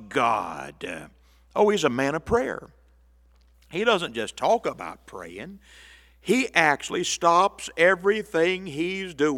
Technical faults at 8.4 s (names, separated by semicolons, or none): none